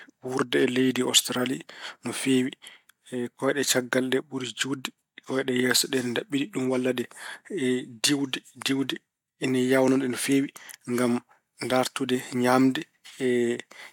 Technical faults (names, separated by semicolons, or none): none